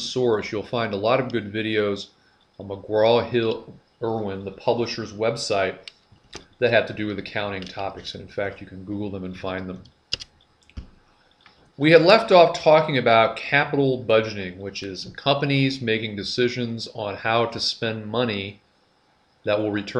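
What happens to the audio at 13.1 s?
Nothing goes wrong at 13.1 s: the audio plays through that moment intact, with no dropout, click or other fault.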